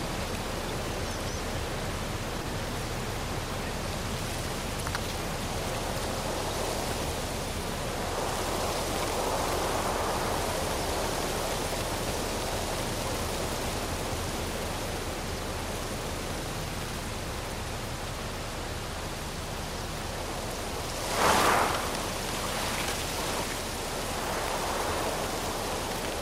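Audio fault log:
2.42–2.46 s, short concealed packet loss: about 20 ms of audio failed to reach the decoder in time, and the receiver synthesised a 20 ms patch by extending the preceding signal before cross-fading back into the received stream across this 40 ms window. The substituted segment imitates rather than reproduces the original, so the passage comes across as a brief smear or wobble.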